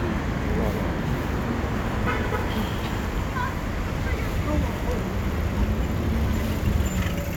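No technical faults can be heard at any point in the recording.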